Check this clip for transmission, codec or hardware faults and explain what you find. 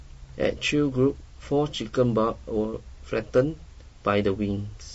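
One codec fault runs through the whole clip: low-delay AAC compression. From start to finish the speech sounds rough and grainy, with noise filling the gaps between harmonics and a thin, synthetic-sounding top band. The likely cause is AAC-ELD coding, whose short frames resolve pitch harmonics poorly, and the plainly audible damage fits a low rate of about 32 kbps.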